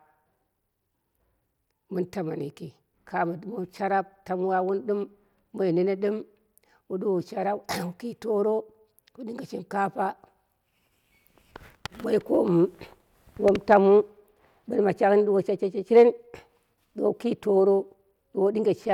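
There are no technical faults to describe in this speech clip.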